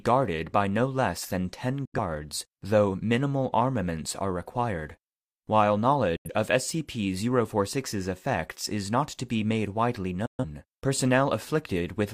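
At 1.85 s the speech drops into a brief hole, and it happens again at 6.16 s and 10.26 s. These are digital broadcast dropouts. The receiver lost good frames and muted until clean ones arrived, so whatever was sent in those gaps is simply gone. The first two holes last 85 ms and the last 128 ms, which fits two and then three lost frames. A 3 ms fade makes each one a sharp cut rather than a click.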